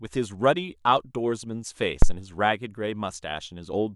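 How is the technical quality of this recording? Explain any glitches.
The recording has one clear technical fault in the speech. A phantom power thump occurs from 2.02 to 2.17 s. When phantom power, or another supply, is switched on a live input, the sudden voltage step passes through the coupling capacitors into the signal path. It is heard as a deep, low-frequency thud peaking at about -4 dBFS, and it dies away quickly, with a decay of roughly 33 ms.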